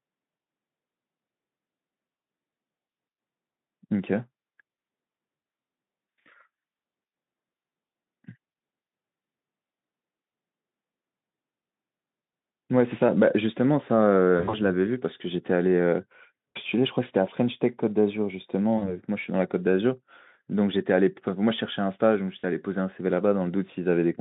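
VoIP packet loss concealed by the speech codec occurs at 5.35–5.43, 8.51–8.53, 14.37–14.61 (gaps scattered over 160 ms), 16.49–16.58, 18.77–18.96 and 22.39–22.45 s. At each, the narrowband Speex decoder fills missing frames by extrapolating, leaving brief buzzy or noisy, fading smears.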